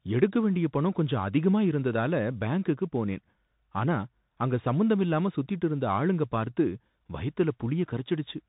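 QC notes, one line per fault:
Throughout: Bluetooth CVSD headset codec, plainly audible. The speech is band-limited with nothing above about 3.8 kHz, s sounds turn scratchy and a granular hiss sits underneath. One-bit up-down steps at 64 kbps lag loud high sounds, which sets it apart from a clean telephone band-limit.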